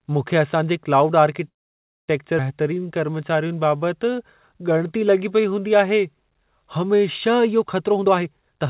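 Right after "मूंखे असां जे क्लाउड", at 1.48 s, packets were likely held up in transit and the jitter buffer ran dry. The result is a call audio freeze. The receiver had nothing new to play, so the last sound trails off and then drops to near silence for about 0.57 s of the 0.6 s stall. At 2.10 s the audio resumes where it left off, delayed but with nothing lost.

At 2.38 to 2.40 s comes a skip ahead. With later audio already queued, a stretch was dropped, cutting out about a third of a second. The two sides of the cut are joined with only a few milliseconds of fill, so the sound lurches forward abruptly and the join is heard as a sudden jump instead of a pause.

From 2.63 to 5.61 s the jitter buffer was building up its reserve, which brings on a jitter buffer slow-down. The receiver repeated single pitch periods and slivers of pauses over and over, adding about 0.32 s in all. Playback runs at about 89% of normal speed while pitch stays put, so sounds are stretched out and drawn.

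From 7.90 to 8.67 s the opposite happens. The buffer now holds more than its target, and the receiver trims short pitch-period pieces in quick succession, removing around 0.4 s. This jitter buffer speed-up pushes the audio to about 154% of normal pace at unchanged pitch, so the end sounds rushed and clipped together. Throughout the clip, the call path's band limit at 4 kHz leaves the audio without top end, which fits G.711 mu-law coding.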